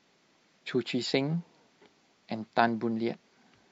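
At 0.58 s, damaged data in a compressed stream corrupts a short run of the encoded speech, so the decoder can't read the frames there. It misinterprets or drops them, loses its place in the stream, and has to hunt for the next valid frame header before normal decoding resumes. The result is a brief chirp or blip lasting barely over 10 ms.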